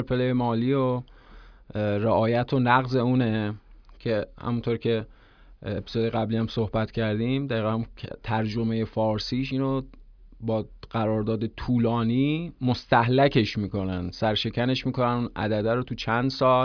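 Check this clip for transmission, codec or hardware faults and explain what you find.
Nothing in the speech points to a fault anywhere in the chain. No point in the clip calls for comment.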